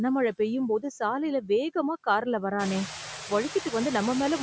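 Noise suppressor artifacts run right through this speech: the suppressor pulls steady-noise bands down only about 2 dB, so the noise dips between phrases and swells back under them. When the room noise jumps by about 20 dB around two and a half seconds in, it ends up sitting about 13 dB below the voice. The call microphone processing keeps everything under 8 kHz, as it should.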